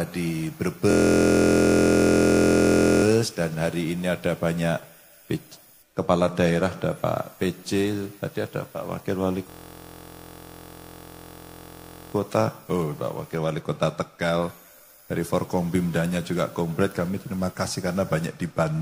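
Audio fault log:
0.91–3.04 s and 9.50–12.14 s, system hang loop: the sound abruptly turns into a steady, rough buzz at 43.1 Hz. A 23.22 ms slice of audio, which fits a 1024-sample ring buffer, repeats exactly: 92 times in the first stretch and 114 in the second. The computer or driver stalled while the playback hardware kept cycling through the same buffer. Because the loop is so short, its repetition fuses into a pitched drone rather than a stutter, and essentially no audio appears to be lost.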